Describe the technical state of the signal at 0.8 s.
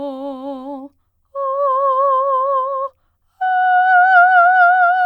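At 0.8 s the music sits inside a stretch of repeated timing corrections running from 0.30 to 4.98 s. The receiver keeps repeating short pieces to stay in step, playing the passage at about 98% speed and stretching it by around a tenth of a second overall. It comes across as faint hiccups and a slightly unsteady tempo. On a waveform these show as small duplicated segments at uneven spacing; on a spectrogram they appear as brief vertical seams where harmonic lines jump or restart.

Behind this is clock drift between sender and receiver, present throughout. The sender's clock runs roughly 2% slow, so the jitter buffer keeps draining and the receiver fills the gap with repeats, all in the same direction. Visually, the seams recur irregularly across the whole timeline rather than at fixed intervals.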